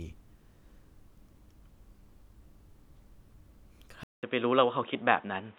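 At 4.03 s the audio drops out for about 0.19 s, then returns band-limited near 3.8 kHz, about 5 dB different in level, with a new noise floor, likely an input switched to a poorer device.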